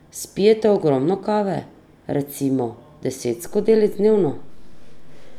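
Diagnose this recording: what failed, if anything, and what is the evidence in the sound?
A DC step at the converter or analogue input stage: at 3.47 s the waveform's zero line jumps by about -31 dBFS, heard as a single low thump while the speech carries on unchanged. Unlike a dropout or digital click, nothing is lost, and the offset holds to the end.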